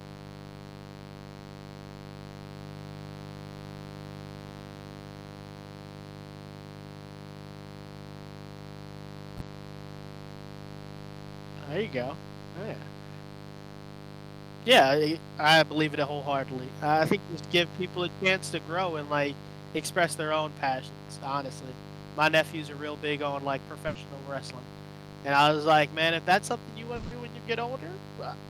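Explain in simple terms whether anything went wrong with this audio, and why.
Yes, several things went wrong. A steady, raspy buzz sits under the speech the whole way through. This is mains buzz: electrical interference from the 50 Hz power supply leaking into the recording.

Around 9.37 to 9.43 s, and again at 19.77 to 19.81 s between "to grow and like" and "their own passions honestly", there are brief smears. This is short concealed packet loss: a few hundredths of a second never arrived, and the receiver papered over the gap.

At 23.87 to 23.97 s, just after "real big on like", the sound holds and fades for a moment, then jumps ahead. This burst of packet loss dropped about 80 ms of the call.

From 26.95 to 27.13 s, after "if that's something you", the sound is stretched and fades for about 160 ms before "when you" picks up. This was likely a long network dropout, with that stretch of audio lost.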